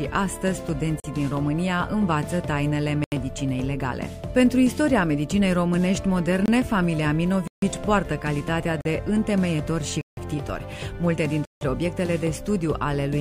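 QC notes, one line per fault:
1.00–1.04, 3.04–3.12, 6.46–6.48, 7.47–7.62, 8.81–8.85, 10.01–10.17 and 11.45–11.61 s: blocks of digital silence. Stretches of the audio drop out, lasting 23 to 160 ms. The sound stops and restarts with no fade. The shortest gaps sound like pops, and the longest like brief holes. This fits the output buffer not being filled in time.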